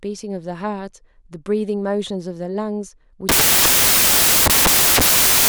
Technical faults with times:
3.29-5.49 samples built from the wrong bytes

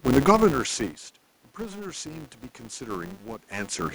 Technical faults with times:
0.00-3.94 filter restarted on every block
1.56-3.94 automatic gain rising

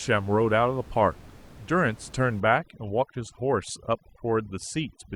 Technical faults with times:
2.40-5.15 overdone noise removal

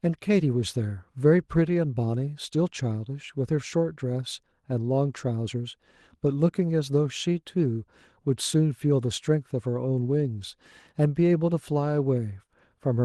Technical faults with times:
10.19 lost packet rebuilt from error correction

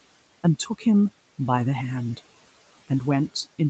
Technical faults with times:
0.59-0.85 speech cut by the noise suppressor

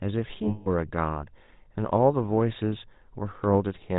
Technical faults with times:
0.00-3.98 GSM full-rate codec
0.48-0.69 lost GSM frames

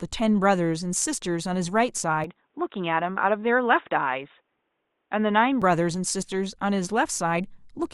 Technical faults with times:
2.24-5.62 input switched to a poorer device

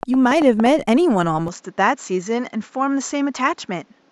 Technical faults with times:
0.03-0.67 train of clicks
1.48-4.11 input switched to a poorer device

